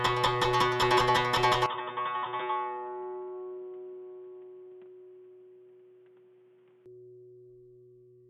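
From 1.66 s to 6.86 s the music turns dull and quieter, with nothing above 3.8 kHz and faint new background noise. The input likely switched to a poorer device.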